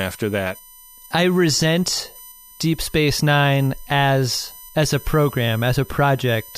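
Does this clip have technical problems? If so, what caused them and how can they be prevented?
Yes. Current drawn by the USB bus in 1 ms frames is leaking into the audio path through power or ground, so this speech carries a USB whine for its whole length. The fixed 1 kHz pitch and its harmonics persist, with the strongest component up at 14 kHz. The whine sits roughly 20 dB below the speech. To prevent it, power the interface from a clean supply or a powered, isolated hub, and keep audio grounds separate from the computer's USB ground.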